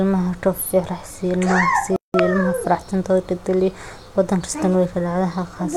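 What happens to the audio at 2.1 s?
A playback stall runs from 1.96 to 2.14 s, so the speech cuts out in mid-flow for about 180 ms of silence before resuming. The player likely ran out of buffered data or had its output thread blocked until it recovered.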